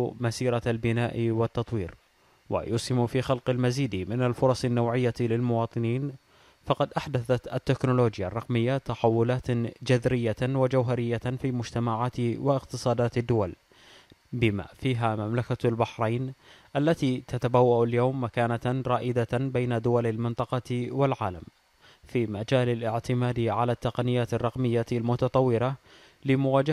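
Nothing here calls for comment: the audio runs along without any technical trouble that a listener would catch.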